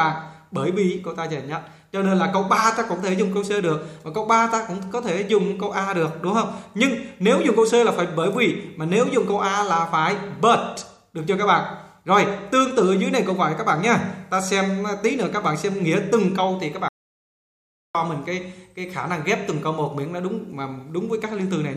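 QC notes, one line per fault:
16.88–17.95 s, audio dropout to silence: the sound cuts off mid-flow and resumes about 1.06 s later, the gap holding silence with no room tone, likely because the input was briefly lost while the recorder kept writing silence.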